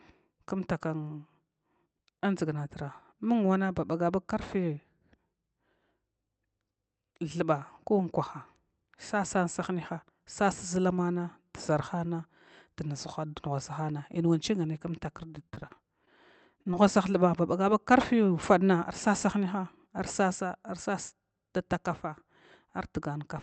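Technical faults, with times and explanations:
15.27–16.09 s, repeated packet loss (robotic sound): Over this stretch audio packets kept failing to arrive in time. The decoder had to patch what sounds like eight separate holes, the longest about 34 ms, by stretching the last good sound forward each time. With roughly a fifth of the span rebuilt this way and the next hole arriving almost immediately, the sound turns choppy, with small pieces missing.
16.63–16.67 s and 16.71–16.74 s, short concealed packet loss: Two brief dropouts close together, each consistent with one lost 20 ms frame. The receiver covered them with about 27 ms and 11 ms of synthesized continuation, carrying on the preceding pitch or shaped noise before blending back into the real signal. The result is a quick smear or wobble rather than a clean gap, and a short consonant-like sound in that spot can disappear.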